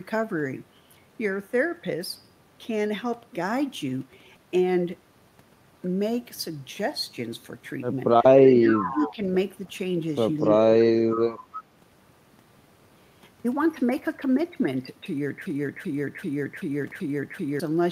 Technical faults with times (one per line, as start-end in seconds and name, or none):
8.40-9.14 echo leak
8.43-9.20 speech suppressed in double talk
10.40-10.45 echo leak
10.61-11.21 speech suppressed in double talk
11.13-11.21 echo leak
11.52-11.63 echo leak
15.46-17.60 broken-record loop